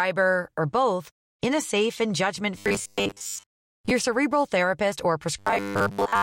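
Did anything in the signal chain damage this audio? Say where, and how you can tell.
Yes. The damage is robotic sound from repeated short buffers, at the driver or buffer stage. The speech turns into a rigid, metallic buzz from 2.58 to 3.93 s and again from 5.39 s to the end. The buzz sits at a fixed 100 Hz, which fits a 10 ms buffer being replayed. New audio likely arrived too late, so the same short block was repeated while most of the real audio was skipped.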